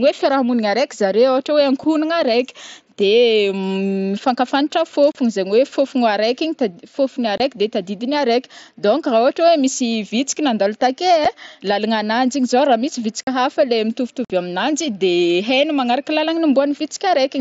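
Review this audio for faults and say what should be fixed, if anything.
Unconcealed Bluetooth headset packet loss leaves abrupt silent gaps at 5.12–5.15 s, 7.38–7.40 s, 11.25 s, 13.23–13.27 s and 14.25–14.30 s, lasting 7.5 to 52.5 ms. Lost headset packets were replaced by silence, and the gap lengths step in 7.5 ms units, which fits the mSBC packet size. Enabling packet loss concealment at the receiver and improving the headset-to-phone radio link would prevent these dropouts.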